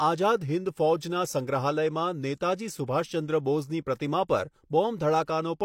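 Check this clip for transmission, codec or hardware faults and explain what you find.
One codec fault is present. Pre-echo at 2.87 s: a short hiss, about 16 ms long, comes just before a sharp speech onset. The codec spreads its quantisation noise across the whole transform block, so the onset's noise leaks ahead and softens it. Unlike a click, it runs straight into the attack rather than sitting apart.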